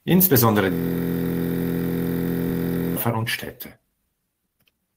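From 0.73 to 2.96 s a system hang loop repeats one 23.22 ms slice over a hundred times, a steady 43.1 Hz buzz consistent with a 1024-sample buffer, seen as identical waveform cycles and vertical spectrogram stripes.

From 3.76 to 4.96 s a jitter buffer speed-up trims pitch periods to shed roughly 0.4 s, making speech run at 135% and sound hurried, with compressed spectrogram patterns but unchanged harmonic spacing.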